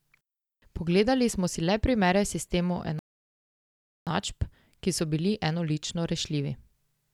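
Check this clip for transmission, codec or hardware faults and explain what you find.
A rebuffering stall interrupts the speech from 2.99 s to 4.07 s: the player exhausted its downloaded audio, fell silent, then resumed exactly where it stopped, adding about 1.08 s. The waveform shows a flat gap; the spectrogram shows a blank vertical band.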